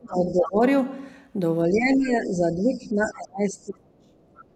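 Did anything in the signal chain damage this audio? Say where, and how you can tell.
Yes. Speech suppressed in double talk, a call-processing fault, occurs from 0.00 to 0.61 s and 1.69 to 4.17 s. The level sinks by roughly 30 dB in uneven pieces while a second talker is active. This is likely the echo canceller ducking both sides at once. Packet loss would leave clean gaps instead.

The other side's voice leaking through appears at 0.30–0.51 s, 1.73–1.78 s, 1.95–2.09 s, 2.61–3.07 s and 4.35–4.45 s, roughly 15 to 30 dB under the speech. This points to likely residual loudspeaker echo the canceller missed. Electrical crosstalk would be steadier and fuller.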